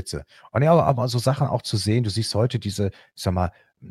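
No technical faults can be heard anywhere in this speech clip. There is nothing to place on a timeline, as no dropout, glitch or other disturbance occurs at any point.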